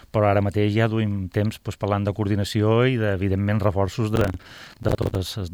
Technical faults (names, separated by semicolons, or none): processor overload crackle